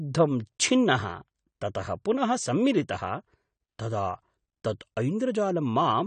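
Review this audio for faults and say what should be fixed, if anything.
A low-bitrate lossy encode, likely AAC compression at a rate that fits about 32 kbps, affects the whole clip. It discards everything above 9 kHz and coarsely quantises what remains, so the speech sounds dull and smeared, with plainly audible warbling and fizz on sustained sounds and sibilants. Encoding at a higher bitrate, or keeping an uncompressed master for this path, would prevent it.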